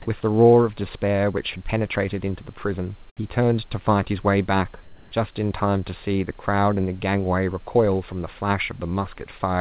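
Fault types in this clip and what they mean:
Comfort noise in place of the background: between 4.84 and 5.12 s the background becomes steady, featureless hiss about 3 dB different, likely receiver-generated fill; the spectrogram shows a smooth, uniform patch.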